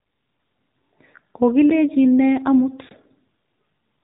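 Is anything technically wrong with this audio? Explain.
Yes. Throughout, the speech sounds buzzy and thin, with a synthetic edge and nothing above about 3.8 kHz. This is the AMR narrowband mobile codec: the voice is rebuilt from a vocal-tract model driven by sparse pulses in 20 ms frames, and the damage points to a low rate near 7.4 kbps.

A brief tick and a short hole interrupt the speech: at 1.70 s, a 10 ms dropout just before "ne amut", and at 2.89 s, an 18 ms dropout just after "ne amut". Each is a block of digital silence, where the samples were zeroed and the signal cut abruptly out and back in.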